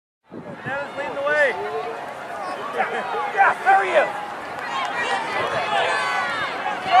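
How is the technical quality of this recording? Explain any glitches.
No glitches here; the recording holds steady throughout.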